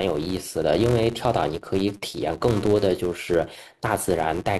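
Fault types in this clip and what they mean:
Filter restarted on every block: the speech carries a buzz at 200 Hz, because a filter in the chain loses its memory at each block boundary and begins again from zero. A small transient is produced at the start of every block. The blocks arrive 200 times a second, which points to a block of about 5 ms. On a waveform this appears as regularly spaced ticks riding on the speech, and on a spectrogram as a 200 Hz line and its harmonics throughout, strongest where the speech is loud.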